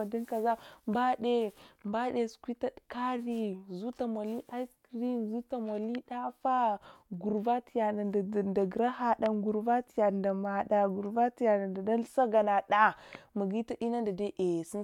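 Nothing in the recording stood out as a technical problem on listening.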